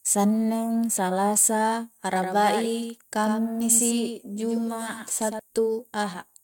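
A doubled audio track runs from 2.13 to 5.39 s in this speech. The same signal is heard twice, with a second full-band copy trailing the first by roughly a tenth of a second and sitting somewhat quieter, around 5 dB down. It likely comes from the audio being captured again over a slower path and mixed back in. The copy carries no decay or room colour, so it sounds like a flat slapback, and it switches in and out abruptly at both ends.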